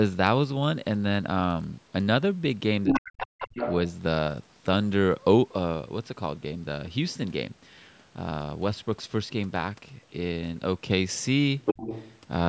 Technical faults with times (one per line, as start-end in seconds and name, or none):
2.87-3.75 other side's voice leaking through
2.87-3.58 speech suppressed in double talk
11.62-12.19 other side's voice leaking through